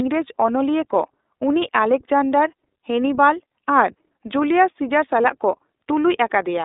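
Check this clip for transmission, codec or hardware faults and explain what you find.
One codec fault is present, the iLBC codec, and it runs through the whole speech recording. The audio passed through a narrowband iLBC path, consistent with its 15.2 kbps mode and 20 ms frames, with each frame's excitation coded on its own. The line band sits at about 300 Hz to 3.7 kHz, and nothing above 3.8 kHz survives. The speech therefore sounds muffled and thin, with a plainly audible rough, synthetic edge.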